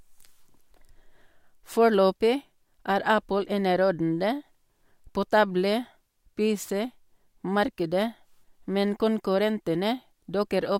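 No technical faults can be heard in the speech recording at any point.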